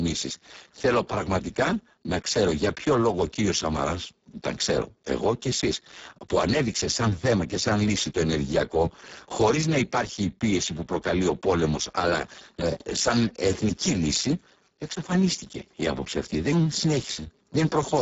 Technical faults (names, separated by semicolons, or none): Speex codec